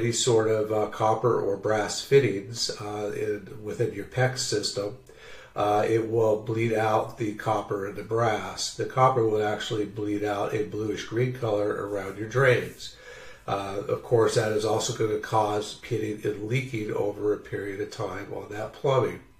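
Nothing here stands out as a technical problem; the sound just carries on steadily without any glitches catching the ear.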